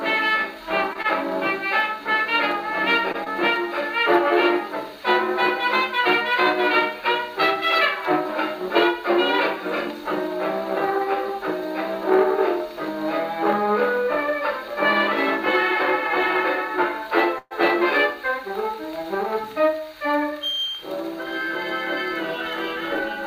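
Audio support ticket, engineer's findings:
Short stall from a late packet at 1.02–1.06 s and 3.12–3.16 s. Sound held about 23 ms, then 18 ms. Jitter buffer ran dry. Playback resumed in place; nothing lost.

Short concealed packet loss at 3.24–3.28 s. About 20 ms never decoded. Receiver extrapolated the last sound and blended back, leaving a brief smear.

Call audio freeze at 17.38–17.53 s. Sound stretched into a fading fill for 124 ms, with the final 20 ms silent. Likely network delay emptying the jitter buffer. Audio continued from the same point.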